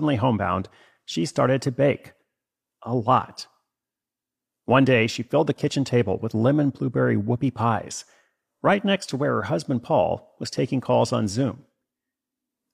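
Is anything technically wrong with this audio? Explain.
No, nothing technically wrong is audible in this speech recording.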